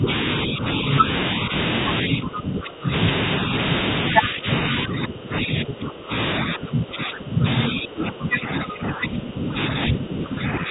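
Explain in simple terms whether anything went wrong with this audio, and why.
The talker's speech keeps sinking and thinning, sometimes nearly vanishing: briefly at 0.0, then 0.46–0.85 s, 1.03–1.28 s, 1.47–1.64 s, 2.07–3.7 s, 4.02–7.45 s and 7.72 s to the end, with the deepest drops near the start and in the middle stretch. This is likely speech suppressed in double talk. The far side was talking at the same moment, and the echo canceller, unable to tell the talker from its own loudspeaker echo, turned everything down.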